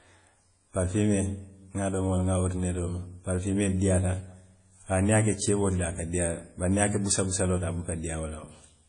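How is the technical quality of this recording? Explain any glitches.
The recording's quality is limited by lossy compression, which is plainly audible across the whole clip of speech.

Throughout, the sound is band-limited with nothing above 10.1 kHz, and it rings and washes, with a hiss that breathes with the signal. This is likely WMA compression, consistent with a low bitrate around 32 kbps. Long transform blocks smear quantisation noise over tens of milliseconds, and weak spectral lines are discarded.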